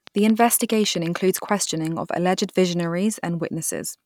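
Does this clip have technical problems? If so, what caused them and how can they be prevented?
Yes. A train of clicks runs from 0.07 s to 1.5 s, ending just before "of alleged": about fifteen near-identical pops arrive at a steady 9.2 per second. They peak a few decibels above the speech and are audible between syllables as well. Their even spacing and matching shape set them apart from random crackle or a single edit click. The likely cause is electrical interference or a faulty connection or power supply. Shielding cables, moving away from noisy equipment and using a stable interface and driver would prevent it.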